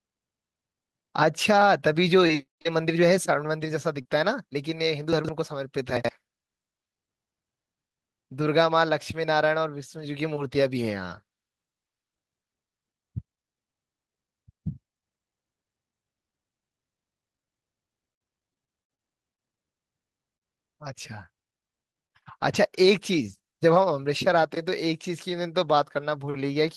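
Between 2.19 and 4.09 s there are scattered short gaps, about four small packet losses where the receiver patched each hole by stretching the last bit of sound forward. The gaps are short, the longest around 30 ms and roughly 100 ms filled in total, so the speech stays clear but picks up a few little ticks and smeary hiccups.

At 5.13 to 5.29 s you get chunks out of order. A 40 ms piece of audio turned up three chunks late and plays after material that should have followed it. Nothing's missing, but the jumbled order leaves hard joins, and it lands as a quick garbled stumble. The same thing happens again at 5.97 to 6.09 s, this time a 40 ms chunk two places late, with the same scramble.

From 17.37 to 23.40 s the scattered short gaps come back and there are more of them, around fifteen dropouts spread across the stretch. Each hole is patched by continuing the previous sound, with roughly 400 ms concealed in all and the longest gap near 50 ms. 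The speech stays intelligible, but this section has more ticks and hiccups than the first one.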